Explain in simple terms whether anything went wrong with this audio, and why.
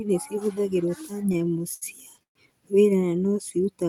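From 1.21 to 2.37 s, repeated stalls (stutter): late data paused playback 13 times, stretching the last sound up to 123 ms, so the speech drags.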